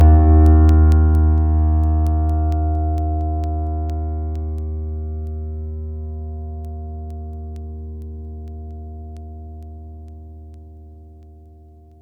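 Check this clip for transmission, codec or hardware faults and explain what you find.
Two faults are present: a comb-filtered, hollow tone for the whole clip, and a regular train of clicks.

Channel delay (comb filtering) runs throughout. One channel arrives about 10 ms behind the other, and when the two are summed to mono, the material they share cancels at evenly spaced frequencies. The first notch sits near 50 Hz, with further notches roughly every 100 Hz above it. The result is a thin, phasey, hollow colour that stays fixed for the whole clip.

Word clock ticks occur from 0.24 s to 11.92 s, repeating about every 0.2 s, around fifty in all. The receiving device is running on its own clock rather than locking to the sender's, and the rates differ by something like 100 parts per million. Each time the two clocks slip past each other, a single sample is dropped or repeated. The discontinuity comes through as a short, sharp tick at a steady rhythm, varying in strength from one tick to the next.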